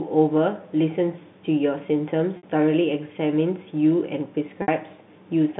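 At 2.37–2.43 s and again at 4.62–4.68 s, packet loss with pitch repetition bridges 60 ms gaps, which fits two lost packets each, with a held, buzzy repeated cycle. On the waveform these are identical periods decaying; on the spectrogram, frozen harmonics.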